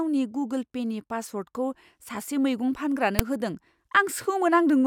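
File tags played as audio at 3.19 s: a block of text metadata, followed by zero padding, has been read as if it were sample data. The text bytes give a brief, loud rasp pushed to one side, and the padding drops abruptly to silence, so the speech is cut by a hard-edged click of static.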